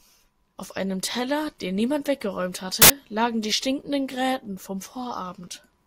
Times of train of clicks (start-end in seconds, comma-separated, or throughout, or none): none